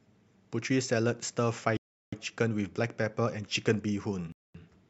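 At 1.77 s the speech cuts to silence for 355 ms, and again at 4.32 s for 223 ms, resuming where it stopped. Both gaps show as flat, empty columns on the waveform and spectrogram. This is likely a Bluetooth stall, with the headphones' buffer running dry while delayed packets were resent.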